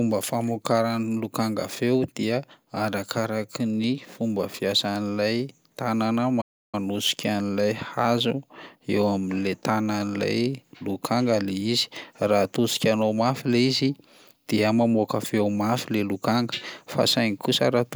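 The player most likely ran short of data or had its thread blocked, causing a playback stall from 6.41 to 6.75 s: just after "ny fomba fiasan'ilay tanana", the speech cuts to silence for about 0.32 s, then resumes mid-flow.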